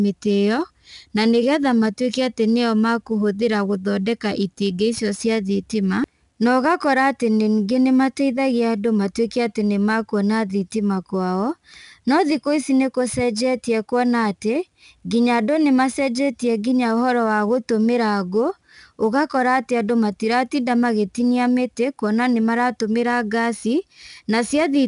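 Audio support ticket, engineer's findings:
Gritty, plainly audible hiss riding every loud syllable, roughened consonant attacks, nothing above 10.6 kHz; throughout. 4-bit ADPCM compression: coarse adaptive-step error tracks level, lags transients. Bandwidth and 89 kbps point to roughly 22 kHz sampling.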